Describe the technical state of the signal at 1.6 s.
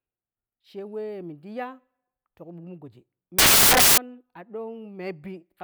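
No fault is audible at 1.6 s; the speech signal is intact at that point.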